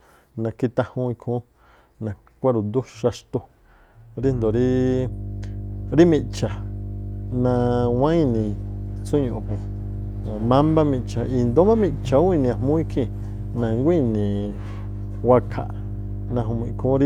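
From 4.2 s to the end, a steady low 50 Hz tone sits only a little beneath the speech: mains hum, the power line leaking in through a ground loop or nearby transformer.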